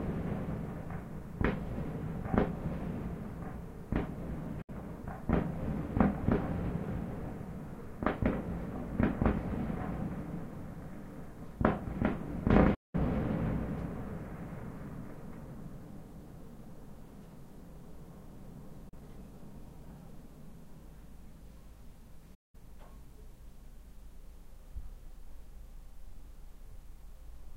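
Digital broadcast dropouts mute the sound at 4.62 s (64 ms), 12.74 s (192 ms), 18.89 s (32 ms) and 22.34 s (192 ms). Each is an 8 ms fade into silence where the receiver discarded whole 32 ms frames, and each appears as a flat, empty gap across the waveform and spectrogram.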